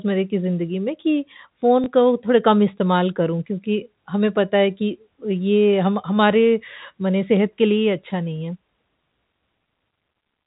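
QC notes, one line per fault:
1.84 s: packet loss with last packet repeated; a 20 ms gap, which fits one lost packet, refilled by replaying the previous chunk, giving a small blip.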